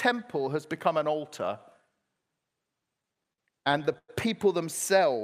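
From 2.97 to 4.10 s the speech suffers repeated stalls (stutter): packets reached the receiver late or more slowly than playback consumed them, so the jitter buffer kept running dry. Fourteen times the receiver stretched the last sound to cover the wait, about 270 ms in all and roughly a quarter of that stretch, the longest hold near 100 ms. Nothing is lost, but the speech drags and judders in short repeated hitches.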